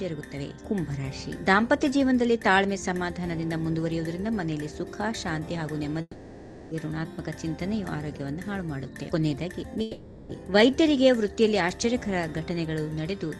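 At 6.01 s the sound turns into a buzzy, fading continuation of itself. It lasts until 6.73 s and ends in a brief silence of about 30 ms. A second, shorter one runs from 9.81 to 10.31 s and fades without reaching silence. Both are most likely a long network dropout. The receiver filled roughly 0.7 s and 0.5 s with concealment, and the real audio returns with that stretch missing. A plain mute or hard cut would stop abruptly, and a single lost packet would blip for only a few tens of milliseconds. Underneath, the call path's coding noise and treble roll-off near 12 kHz fit Opus at a modest bitrate.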